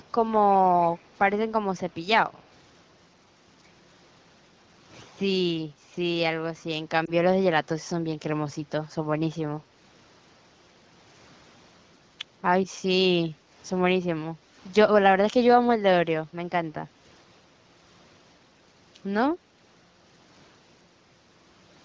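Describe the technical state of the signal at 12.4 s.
At 12.4 s the speech is intact, with no fault present, only the expected limited band of a call that carries nothing above 8 kHz and the light coding of an HD Voice (AMR wideband) link.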